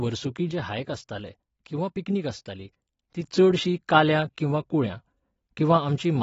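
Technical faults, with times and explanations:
Throughout: AAC compression. The speech sounds dull and smeared, with nothing above 7.6 kHz. The spectrogram shows a hard ceiling and patchy bands, likely a low bitrate near 24 kbps.
0.51–3.24 s: sudden gain jump. Speech and background noise drop together by about 5 dB, then snap back. The waveform envelope steps down and up with no ramp, likely an unsmoothed gain change.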